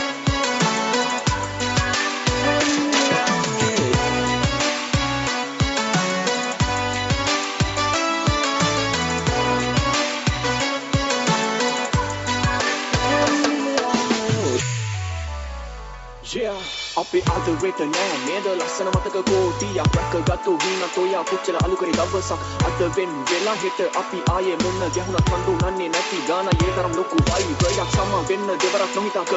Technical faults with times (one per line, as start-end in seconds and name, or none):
none